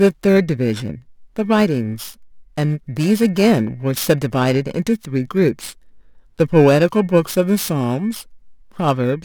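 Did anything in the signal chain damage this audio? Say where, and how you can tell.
Yes. The converter stage is at fault: periodic clock jitter is present throughout the speech, from start to finish. Interference is modulating the sample clock at a steady rate of around 2 kHz, so each sample is taken slightly early or late in a repeating pattern. That timing wobble creates sidebands about 2 kHz above and below every component of the voice, stronger on higher-frequency content, which gives a rough, metallic edge that disappears in the pauses.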